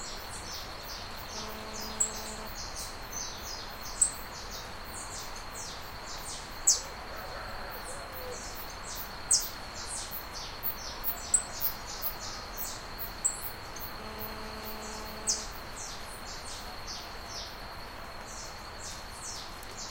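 From 1.35 to 2.48 s, GSM phone buzz appears. It returns from 13.99 to 15.44 s. A nearby 2G phone on a call pulses its transmitter about 217 times a second. The audio circuit rectifies those pulses. The result is a steady, harsh, raspy buzz with many harmonics, about 9 dB below the sound.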